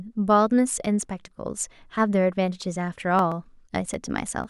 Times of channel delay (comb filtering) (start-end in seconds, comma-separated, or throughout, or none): none